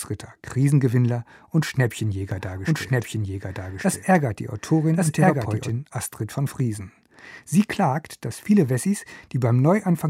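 From 2.3 s to 5.7 s the speech is heard twice, as a doubled audio track: a second full-band copy runs about a second behind, at roughly the same loudness as the original. It likely comes from the same signal being captured again through a slower path. Unlike an echo or room reverb, the copy does not decay or take on any room colour, and it switches in and out abruptly at both ends.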